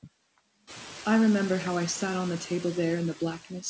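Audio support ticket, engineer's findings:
Noise suppressor artifacts throughout: background noise pumped down about 17 dB between phrases and swelling back under speech. On the spectrogram the noise floor flickers frame to frame in patchy blobs, and waveform gaps sit near-silent. Room noise rises around 0.5 s, and all content stops at 8 kHz.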